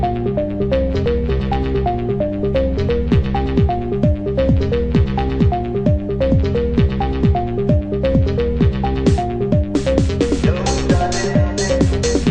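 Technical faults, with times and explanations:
Nothing technical goes wrong anywhere in this one, so there's nothing to list.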